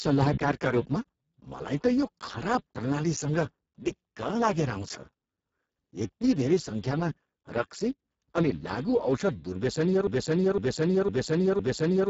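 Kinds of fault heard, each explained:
Speex codec: The whole clip passes through the Speex speech codec at heavy damage, and it sounds like a very low bitrate setting, around 6 kbps. The excitation gets too few bits at that rate. So the speech comes out noisy and hoarse. Nothing is heard above 7.6 kHz. The upper band that does remain is thin and hissy, more a shaped noise fill than real detail.
broken-record loop: From 10.07 s to the end at 12.09 s, one fragment of about 507 ms repeats back to back. It plays four times, identically each time, like a stuck record. The likely cause is a player or stream that stalled and kept sending the last piece it held. Whatever speech should have followed in those two seconds is gone. The clip ends still looping.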